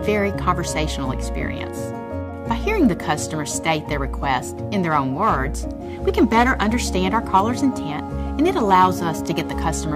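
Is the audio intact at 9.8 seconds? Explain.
Yes, the audio is intact at 9.8 seconds, with no fault present at that moment.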